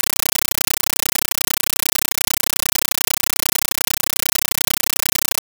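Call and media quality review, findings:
Compressed stream played as audio, entire clip: very loud chattering static replaces the speech. Bursts of about 9.3 ms repeat at 31.25 Hz with silent padding between, so undecoded AC-3 frames are reaching output as PCM. The strict frame rhythm distinguishes it from random noise.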